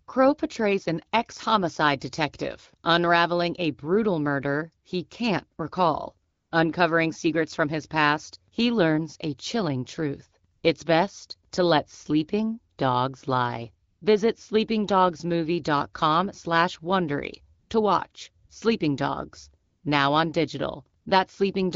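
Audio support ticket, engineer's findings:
AMR comfort noise: real background replaced by smooth, steady noise in speech gaps at 6.31–6.51, 10.53–10.63, 13.89–14.01, 17.59–17.69, 18.11–18.13, 18.45–18.49, 19.65–19.83 and 21.01–21.05 s. The sender's voice activity detection stopped transmitting speech frames for 20 to 200 ms, and the receiver synthesised filler noise. Speech around the gaps carries light AMR wideband (HD Voice) coding, consistent with a 12.65 kbit/s mode.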